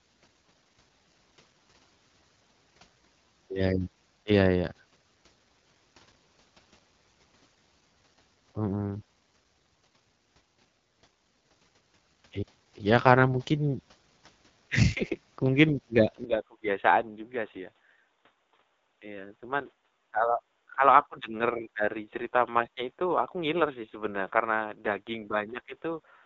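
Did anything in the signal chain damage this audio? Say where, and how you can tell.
Yes. Throughout, the speech sounds rough and raspy, with nothing above 7.6 kHz. This is codec damage, consistent with AMR wideband (HD Voice) running at a low rate, probably 8.85 kbit/s.

From 16.24 s to the end, the sound abruptly turns dull and boxy with no gap. It is cut off above 3.8 kHz, about 5 dB quieter, and carries faint new noise. This likely comes from the input switching to a poorer device.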